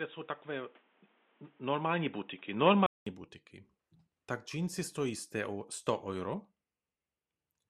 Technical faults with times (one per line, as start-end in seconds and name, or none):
0.00-3.06 input switched to a poorer device